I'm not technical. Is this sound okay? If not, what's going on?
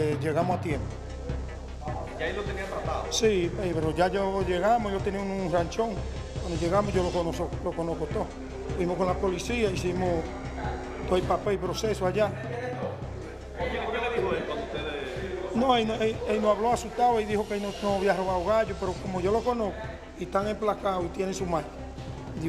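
Yes, nothing wrong with it.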